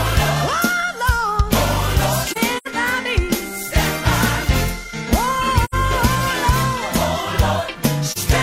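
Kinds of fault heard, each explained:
AAC frame loss with muting: The sound briefly dips out and returns, with soft edges. This happens around 2.30 to 2.67 s, where about 128 ms goes missing in patches across roughly a third of a second, the longest gap near a tenth of a second, then at 5.64 s for about 85 ms and at 8.10 s for about 43 ms. Lost coded frames were replaced with zeroed spectrum, and the overlapping decoder windows fade the sound out and back in.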